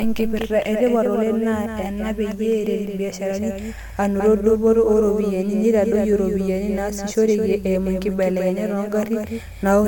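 Throughout, a doubled audio track trails the speech by roughly a fifth of a second, somewhat quieter, likely a second capture path; unlike echo, the single copy never decays.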